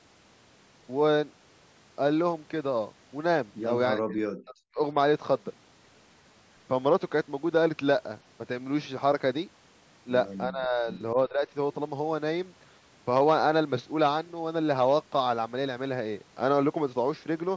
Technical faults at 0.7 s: none

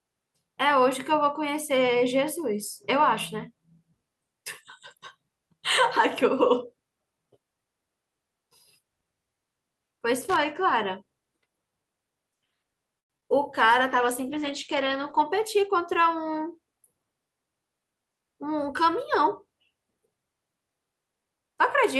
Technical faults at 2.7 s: none

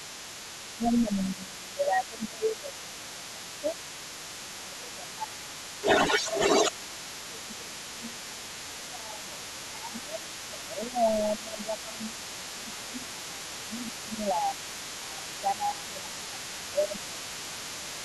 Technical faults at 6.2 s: other side's voice leaking through; speech suppressed in double talk

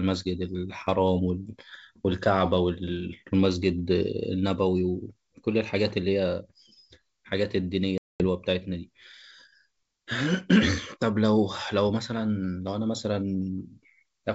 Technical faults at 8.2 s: packet loss on an ADPCM call

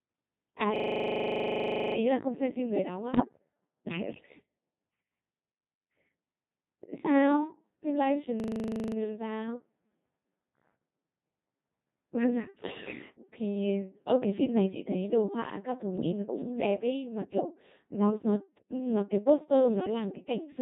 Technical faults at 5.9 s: Codec 2 vocoder

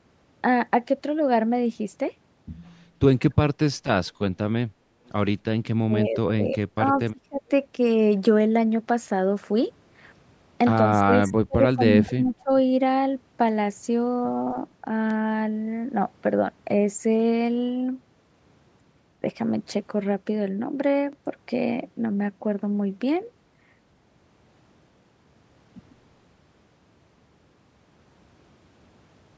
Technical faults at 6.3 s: speech suppressed in double talk

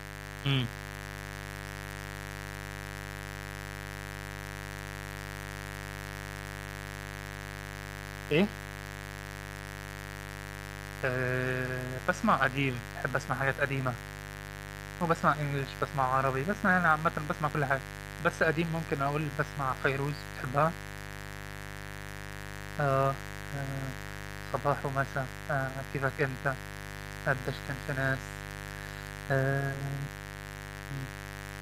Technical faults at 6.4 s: mains buzz

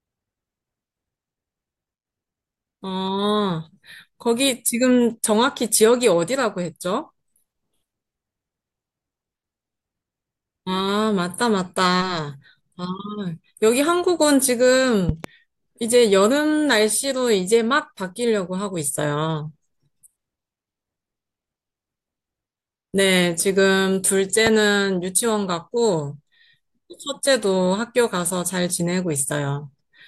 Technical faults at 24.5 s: loud pop

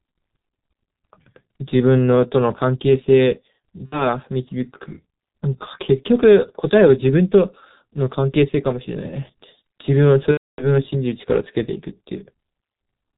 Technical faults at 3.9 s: G.723.1 codec; VoIP packet loss concealed by the speech codec

